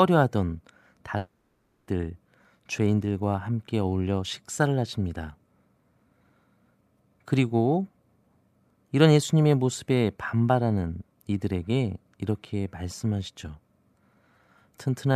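Speech, with a long network dropout from 1.17 to 1.89 s: the sound decays into a fading buzz, then a flat, blank spectrogram gap of about 0.2 s, likely from stalled packet delivery.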